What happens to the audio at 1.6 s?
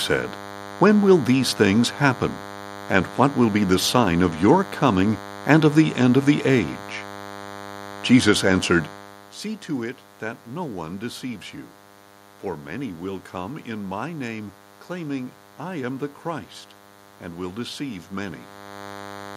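At 1.6 s the speech carries a DECT cordless phone buzz. It is not a momentary event. The buzz runs through the whole clip, from start to finish. A DECT handset or base nearby sends a radio burst every 10 ms. The audio circuitry rectifies those bursts into sound. The result is a steady, thin buzz at 100 Hz, rich in harmonics. It sits roughly 20 dB below the speech.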